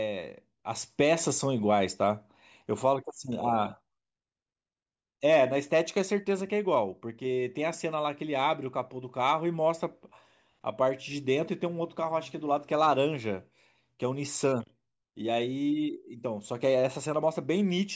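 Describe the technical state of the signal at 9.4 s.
At 9.4 s the speech signal is intact, with no dropout, distortion or other fault.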